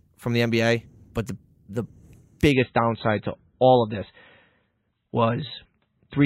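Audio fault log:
2.52 s to end: adaptive stream at a lower bitrate. The speech turns abruptly dull and swirly with no gap, losing everything above about 4.1 kHz. The stream switched to a much lower-bitrate version, which fits a drop from around 128 to 16 kbit/s MP3.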